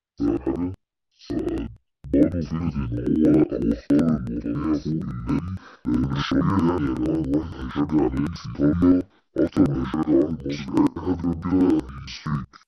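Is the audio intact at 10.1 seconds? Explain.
No. Interleaved audio read as planar runs through the whole speech clip, including 10.1 s. Each block of about 93 ms, which fits a 4096-sample block, has its first half taken as left and its second half as right. Both halves play at half speed, so the speech sits an octave low, doubled and choppy at about 10.8 Hz.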